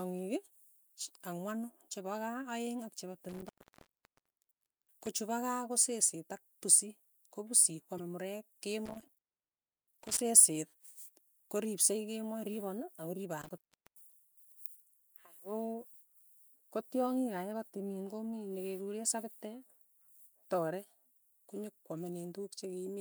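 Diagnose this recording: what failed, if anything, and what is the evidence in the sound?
Intermittent contact in the analogue wiring: the speech drops out three times, at 3.29–5.07 s (open for about 1.4 s), 8.85–10.21 s (0.69 s) and 13.42–14.12 s (0.38 s), with crackle at each edge and faint hiss in the gaps. A loose plug or cable is briefly breaking the signal path.

Damaged data in a compressed stream, at the codec or storage stage: a short glitch at 7.96–8.00 s. Corrupted bytes in the encoded stream left the decoder misreading frames and losing sync until it found the next valid frame header.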